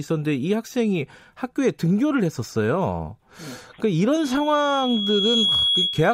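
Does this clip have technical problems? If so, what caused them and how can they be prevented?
Yes. Loudspeaker feedback squeal: a 3.3 kHz tone swells over about a second from 4.18 s to 6.14 s, reaching roughly the speech's level. A steady interference whistle wouldn't grow like this. Keep microphones out of loudspeaker coverage and notch 3.3 kHz.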